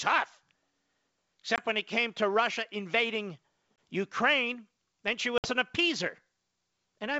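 At 1.56 to 1.61 s, just before "when it came to", at 3.76 to 3.78 s, and at 5.38 to 5.50 s, between "then she" and "an appeaser", the speech drops into hard-edged silent holes from packet loss on an ADPCM call. The first two each lose 20 ms, fitting a single packet. The third loses 60 ms, about three packets. On a waveform each hole is a flat gap with abrupt edges, and a spectrogram shows a clean vertical blank across all frequencies. Because the missing packets were filled with silence, the receiving decoder's predictor and step size no longer matched the sender's, so the speech comes back slightly distorted before settling within a few tens of milliseconds. The G.722 wideband coding still carries the speech up to 7 kHz around the gaps.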